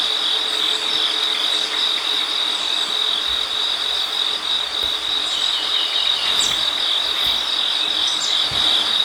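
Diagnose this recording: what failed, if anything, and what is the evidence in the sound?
At the driver or buffer stage, the capture side likely failed to read its buffer before the hardware overwrote it, a dropped buffer (overrun). At 1.24 s and 4.51 s the sound jumps ahead with no gap, losing a few tens of milliseconds and around ten milliseconds respectively.

Over the Bluetooth link, LE Audio frames were lost from 2.88 s to 2.90 s, 20 ms in all, which fits two 10 ms LC3 frames. The decoder filled the gap by repeating the previous spectrum with randomised phase signs, so tonal content briefly turns into a noisy smear.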